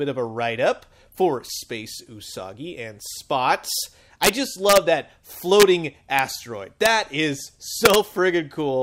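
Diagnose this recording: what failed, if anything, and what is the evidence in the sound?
Integer overflow, in the sample-format conversion or integer gain stage. Violent cracks land at 4.23–4.29 s, 4.69–4.77 s, 5.60–5.63 s, 6.86 s and 7.85–7.95 s. Peaks went about 1 to 4 dB past full scale. Rather than limiting, they wrapped to the opposite sign.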